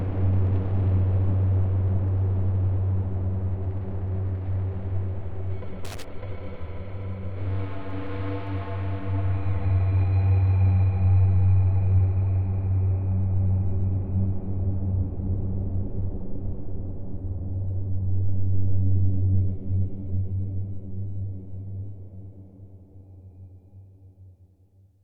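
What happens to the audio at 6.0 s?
A brief, irregular burst of crackle and scratching breaks into the sound from 5.85 to 6.04 s. This is loose connector crackle: a worn or dirty contact rapidly making and breaking, chopping the signal on and off, with any DC on the line adding pops.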